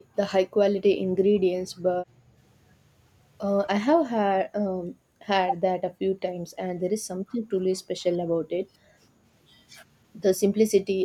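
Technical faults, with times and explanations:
0.00 to 11.04 s, speech suppressed in double talk: the speech sinks in level at 0.00–0.17, 0.46–2.36, 4.27–5.20, 5.55–9.23, 10.50–10.58 and 10.82–11.04 s. The dips run as deep as about 20 dB early on, around 15 dB in the middle stretches, and only about 10 then 5 dB near the end. That pattern is likely an echo canceller hearing both sides at once, mistaking this talker for loudspeaker echo and ducking everything.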